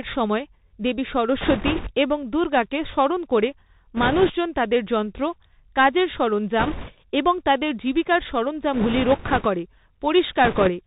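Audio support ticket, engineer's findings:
Bluetooth CVSD headset codec, throughout: speech band-limited to 4 kHz, granular hiss under the voice, scratchy sibilants, loud bright passages distorting. Fits a 64 kbit/s one-bit delta modulator whose adaptive step can't keep up with steep high-frequency slopes.

Bit errors on a Bluetooth voice link: rushing crackle, no hard clicks, at 1.41–1.91 s (after "সময় দেবী", before "এবং দুর্গাকে স্মরণ করে"), 3.96–4.31 s, 6.59–6.93 s (after "তাদের যন্ত্র কাজের"), 8.73–9.47 s (after "এবং তাদের জীবিকার"), 10.44–10.70 s. Error rate of a few percent. Each flipped one-bit step fades quickly, so no loud clicks.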